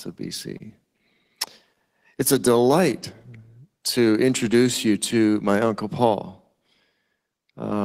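A short stall from a late packet comes at 0.57 to 0.61 s. A packet missed its playout deadline, the jitter buffer ran dry, and the receiver stretched the last sound by about 21 ms before resuming where it left off. Nothing is lost, but that sound is held slightly long, and everything after it plays about 21 ms later.

Short concealed packet loss follows at 0.67 to 0.71 s. About 20 ms of speech never reached the decoder, so the receiver extended the preceding sound to cover the gap and blended back into the real signal. It comes across as a brief smear or wobble.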